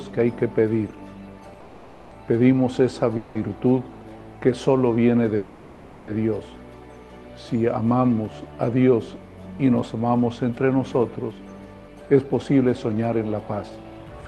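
Three call audio freezes show up early, at 1.60 to 2.13 s, 3.17 to 3.37 s and 5.37 to 6.10 s. Each time the sound stalls into a fading buzzy hold and then carries on where it left off, likely because packets were held up and the jitter buffer ran dry. Nothing is lost, but the delay grows with each one. From 11.31 s to 14.22 s there's a jitter buffer speed-up: the receiver trims tiny pitch-period slices to work off roughly a third of a second of backlog, so the audio runs about 10% fast at the same pitch and feels rushed.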